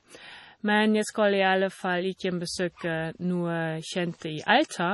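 Watery, swirling speech runs through the whole recording, with a dull top end because nothing is present above 11.4 kHz, and sibilants chirp metallically while word onsets sound smeared. The damage is heavy and is likely MP3 compression at a low bitrate, around 32 kbps. Starved of bits, the encoder cuts the treble at a fixed frequency and drops weaker frequency lines, which flicker on and off between frames and produce the swirl.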